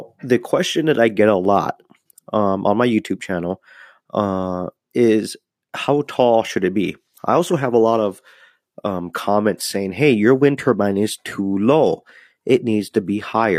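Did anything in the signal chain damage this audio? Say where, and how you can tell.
Yes, an adaptive stream switched to a lower bitrate at the network stage. From 6.86 s onward the quality abruptly drops and codec artefacts rise, fitting roughly 32 kbit/s HE-AAC. Unlike a dropout, there's no gap.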